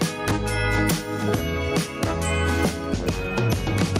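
Throughout the clip the level swings by something like 10 dB, and loud and quiet moments sit unnaturally close together, giving a squashed, pumping feel. This is gain pumping, likely from the input gain being set far too high and a fast limiter or compressor clamping down on every peak, then releasing between them.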